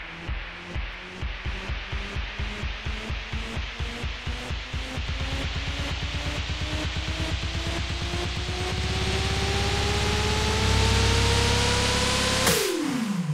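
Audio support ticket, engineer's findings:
Single sharp click at 0.93 s, one thin vertical line across the spectrum. Looks like dropped samples: a tiny fraction of a millisecond missing, so the waveform jumps straight to a later value. Nothing audible actually lost, just the step. Likely a buffer handoff hiccup in capture or playback, worth checking the driver side first.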